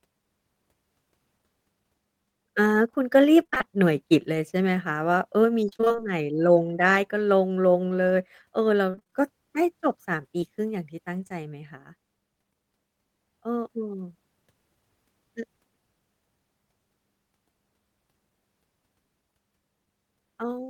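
Around 3.43–3.79 s, 5.69–6.08 s and 8.91–9.21 s there's repeated packet loss: rapid dropouts, nearly half of each stretch patched over, giving choppy, robotic speech. Then at 10.41–10.50 s a short concealed packet loss fills a roughly 20 ms hole with continued sound, leaving a brief smear.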